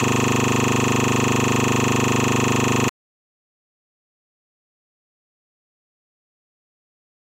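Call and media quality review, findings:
System hang loop, 0 to 2.89 s, already running when the clip opens. The same 40 ms slice repeats 71 times, giving a 25 Hz stuttering drone. Probable component: audio driver or host freezing while the sound hardware keeps replaying its ring buffer. The loop length fits a buffer of about 40 ms. Audio picks back up normally-timed after 2.89 s.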